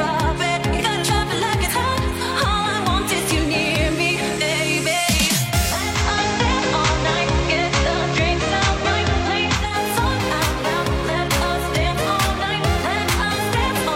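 From 5.68 to 9.89 s faint hiss appears and level shifts about 1 dB: digital radio blending to analogue FM.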